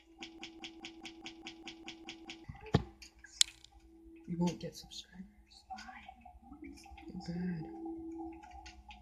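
From 0.39 s to 2.44 s there is a broken-record loop. A fragment of about 207 ms plays ten times, back to back, with no change between passes. The result is a rapid, mechanical stutter that holds for about two seconds. The cause is likely a stall somewhere in the playback or streaming chain, which kept resending the last piece it held. Whatever audio belonged in that stretch is gone, and the sound resumes after the loop ends.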